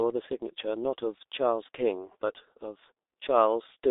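Throughout the speech, the sound is muffled and hoarse, with consonants smeared together and no brightness above about 3.7 kHz or body below 300 Hz. This is heavy G.723.1 codec damage: the codec squeezes speech into 30 ms frames at a rate that fits roughly 6 kbit/s, rebuilding it from a coarse vocal model that updates slowly. Quick articulation is lost between updates, and the narrow telephone band strips the remaining detail.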